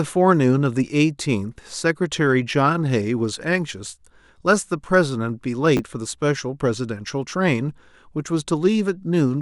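At 5.77 to 5.79 s, chunks out of order: a 10 ms chunk of the speech was delivered or written one chunk late, so it plays after the chunk that should have followed it. No audio is missing, but the two 10 ms pieces swap places, leaving three hard joins where the waveform jumps. The result is a very brief jumbled flicker in the speech.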